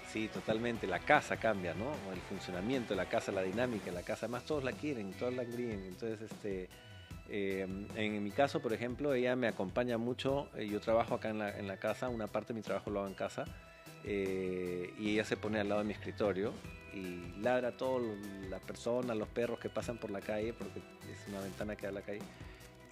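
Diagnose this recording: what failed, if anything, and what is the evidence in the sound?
A steady ticking of about ten clicks a second sits roughly 30 dB under the sound from 16.54 s to the end. This is Wi-Fi interference at the analogue stage: the circuit rectifies a nearby radio's beacon, sent every 102.4 ms.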